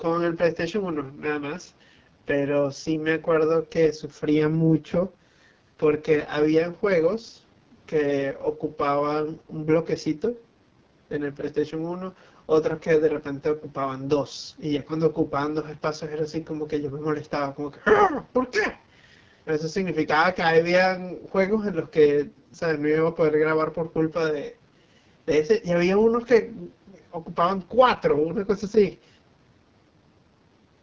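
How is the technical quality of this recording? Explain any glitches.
The technical quality is poor, with one codec fault running through the whole speech recording. The call's microphone processing, which leaves nothing above 8 kHz, is working normally.

AMR wideband (HD Voice) codec, throughout: the speech is coded at 6.6 kbit/s, the lowest AMR-WB rate. At that rate the pulse-driven vocal tract model has too few bits to follow the voice closely, so the speech comes across as heavily rough and raspy. The band from 6.4 to 7 kHz is only shaped noise. Unlike packet loss, the damage is steady rather than gappy.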